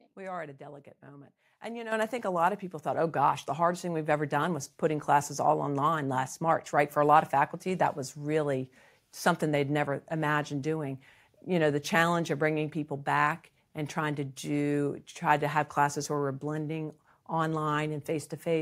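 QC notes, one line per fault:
1.92 s and 2.94 s: microphone volume stepped up, twice. The whole signal jumps in level at once: first by about 9 dB right after "moment and you know", then by another about 3 dB after "a lot of people". Voice and room noise rise together because the call software judged the mic too quiet and bumped the device's input volume in single steps, not gradually, so each change lands abruptly mid-speech.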